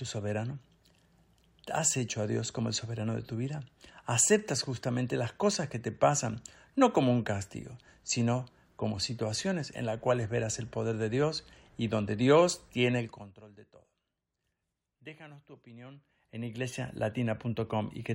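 A speech clip with zipper noise: the level was stepped without smoothing, once down about 20 dB at roughly a hundred steps a second from 12.98 to 13.42 s, just before "de todo", then up about 20 dB at roughly forty steps a second from 15.76 to 16.92 s. Each step leaves a small click, so a ticking buzz rides on the speech while the level moves.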